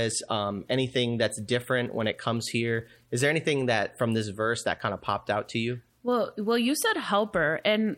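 Nothing stood out as a technical fault anywhere in the recording when listening to it.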